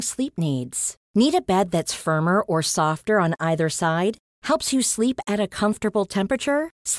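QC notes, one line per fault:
No technical faults are present in the signal.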